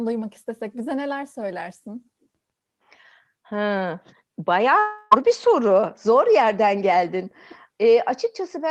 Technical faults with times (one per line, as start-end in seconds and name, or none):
4.79-5.13 long network dropout